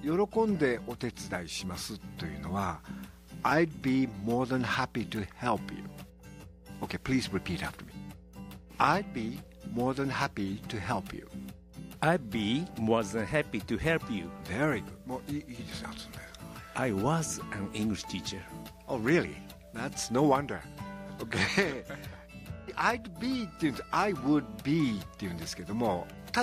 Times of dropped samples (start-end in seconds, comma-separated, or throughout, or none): none